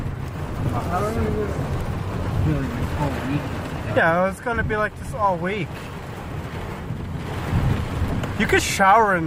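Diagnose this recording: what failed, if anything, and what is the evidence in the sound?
The first fault is a skip ahead in the network and jitter buffer stage. At 2.25 to 2.27 s the audio jumps forward with no fill and no gap. Roughly 0.7 s of material is simply gone. The two sides are butted together almost directly, so the join sounds like an abrupt splice. Audio was lost in transit, or the buffer discarded it on overflow while later packets waited. Playback then resumed from the newer audio, and the delay dropped by about the same 0.7 s.

The second fault is a jitter buffer speed-up, also at the buffer stage. From 4.07 to 4.73 s the audio runs at about 105% speed while the pitch stays unchanged. It sounds slightly hurried. The buffer was holding more audio than its target. To shrink that delay, the receiver repeatedly cut out short pieces of one or a few pitch periods. Together they remove roughly 40 ms across the stretch.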